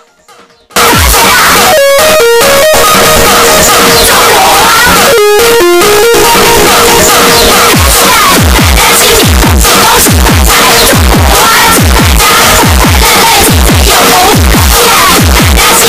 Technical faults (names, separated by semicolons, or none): signed and unsigned mixed up